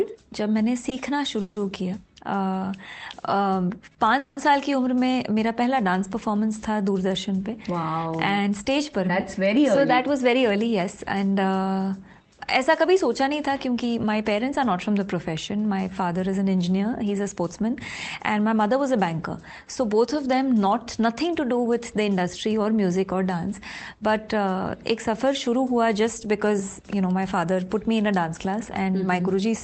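From 0.89 to 4.39 s there are repeated stalls, a stutter. Packets came in late, so the jitter buffer ran dry three times and the receiver stretched the last sound to cover 350 ms, with the longest gap at 180 ms. Nothing's lost, but it drags and hiccups.

Then there's jitter buffer speed-up from 9.57 to 20.82 s. The buffer had built up extra audio, so it trimmed tiny pitch-period slices, about a third of a second in total. The sound runs 3% fast at unchanged pitch. It happens again, briefly, from 27.11 to 27.68 s at 9% faster, cutting roughly 50 ms. That short burst sounds noticeably hurried.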